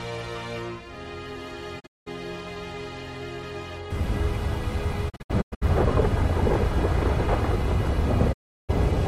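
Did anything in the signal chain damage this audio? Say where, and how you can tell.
Yes. There is a digital broadcast dropout at the reception stage. The audio fades out over about 20 ms into silence, as broken holes at 1.79–2.08 s and 5.08–5.64 s and as one solid gap at 8.32–8.71 s. The receiver muted on failed frames, and the hole sizes fit roughly 32 ms frames.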